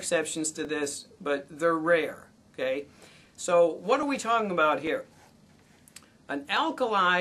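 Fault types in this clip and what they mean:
Clock drift buffer slips: a regular click recurs about every 0.85 s from 0.65 s to 6.57 s, around seven in all. The likely cause is two mismatched clocks, off by roughly 700 ppm, forcing a block of about thirty samples to be dropped or repeated each time.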